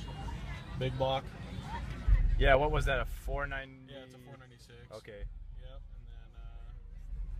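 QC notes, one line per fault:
Nothing to flag here; it all sounds as it should.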